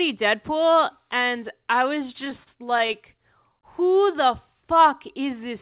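From 2.08 to 2.96 s the speech hitches eight times: repeated stalls (stutter), as late packets emptied the jitter buffer and the last sound was held.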